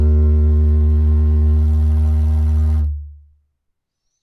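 Nothing goes wrong here at all; the sound just runs its course without a single technical hiccup along the way.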